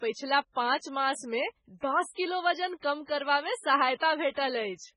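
From start to finish, the speech carries heavy damage, likely from MP3 compression. Nothing sounds above 10.5 kHz, so the treble stops abruptly. The encoder is starved of bits, which points to a very low bitrate, around 16 kbps. Weak frequency lines drop in and out between frames. The result is a watery, swirling texture over the whole clip. Sibilants turn metallic and chirpy. Consonant attacks lose their edges and smear.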